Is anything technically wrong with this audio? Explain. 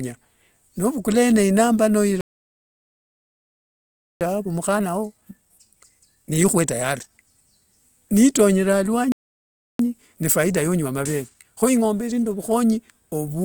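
Yes, the speech twice stops dead and then rushes to catch up.

Playback stall at 2.21–4.21 s (2 s) and 9.12–9.79 s (0.67 s): the sound cuts to silence mid-flow, likely because the player ran out of buffered data or its thread was blocked.

Time-compressed catch-up at 4.21–7.21 s (1.25×) and 9.79–12.79 s (1.1×): the player splices out small pieces to clear its backlog, so the speech sounds hurried at normal pitch.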